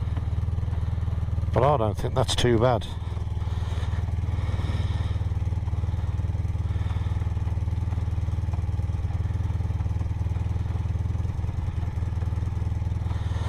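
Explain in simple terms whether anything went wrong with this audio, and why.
At 2.88 s and 9.82 s the sound briefly hops forward. These are compressed frames skipped: chunks of about 23 ms were lost or rejected, dropping roughly one frame first, then about two.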